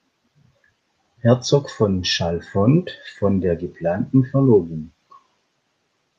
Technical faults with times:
none

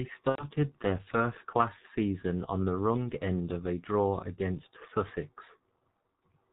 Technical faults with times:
0.00-6.53 G.723.1 codec
0.29-0.48 VoIP packet loss concealed by the speech codec

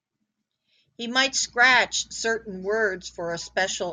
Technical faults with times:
1.26-3.93 mains hum

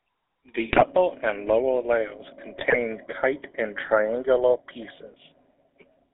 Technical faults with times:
0.00-6.13 GSM full-rate codec
0.72-0.85 GSM bit errors
2.58-2.77 GSM bit errors

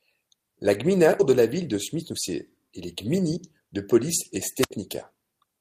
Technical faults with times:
1.19-1.21 skip ahead
3.18-3.85 jitter buffer speed-up
4.60-4.71 wireless microphone squelch dropout

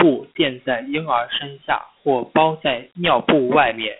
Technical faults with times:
0.00-4.00 Dialogic VOX ADPCM

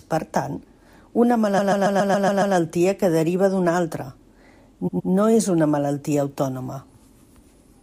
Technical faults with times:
1.57-2.55 repeated frames
4.87-5.10 repeated frames

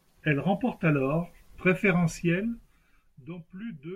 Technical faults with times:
2.07-3.36 zipper noise

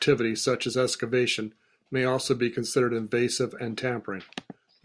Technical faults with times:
none

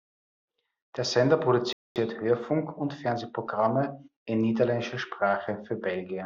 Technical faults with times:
1.73-1.96 rebuffering stall

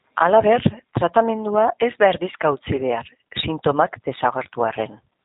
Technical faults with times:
0.00-5.25 G.729 codec

